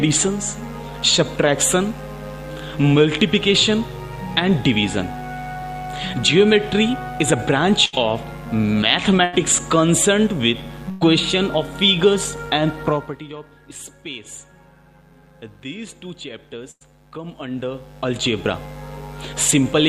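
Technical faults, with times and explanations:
7.85–7.95 s, 9.25–9.35 s, 10.91–11.03 s and 16.71–16.83 s, burst of packet loss: each time a run of audio failed to arrive in time, and the receiver filled the hole for roughly 70 to 100 ms by extending the last sound it had and letting it decay, heard as a brief held buzz or fading hiss. Playback then picks up 80 to 100 ms further along, so that stretch of the original is simply gone.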